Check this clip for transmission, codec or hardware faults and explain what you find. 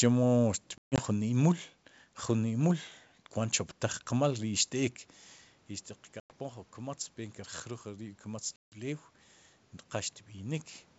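Three dropouts from packet loss on an ADPCM call, on top of what sounds like G.722 wideband coding at 64 kbit/s.

Packet loss on an ADPCM call occurs at 0.78–1.02 s, just before "jun imul", at 6.20–6.31 s, and at 8.56–8.78 s. The missing packets were replaced by silence, giving holes of 160 ms (scattered over 200 ms, longest run 140 ms), 100 ms and 160 ms, which suggests around five to seven packets each. The decoder's adaptive predictor and step size then no longer match the sender's, so the speech resumes after each hard-edged gap slightly distorted before settling.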